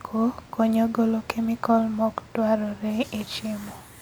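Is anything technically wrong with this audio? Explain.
Yes. Low-bitrate audio saved at a high bitrate runs through the whole speech clip. The file carries the generous data rate of a 256 kbit/s MP3, with content reaching up to about 20.1 kHz, yet the detail sounds like it was likely already thinned by an earlier low-rate encode, something like 48 kbit/s HE-AAC. Re-encoding cannot bring back what that first pass discarded, so its artefacts remain audible while the extra bitrate adds almost nothing.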